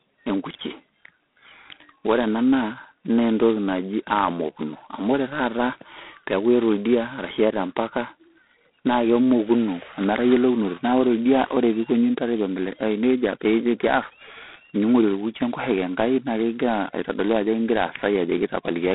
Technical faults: G.726 ADPCM

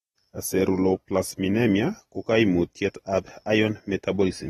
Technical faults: AAC compression

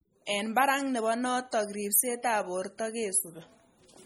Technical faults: MP3 compression

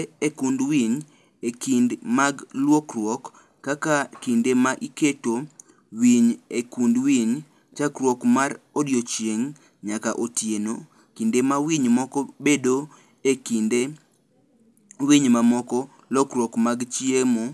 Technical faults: resampler restarted on every block

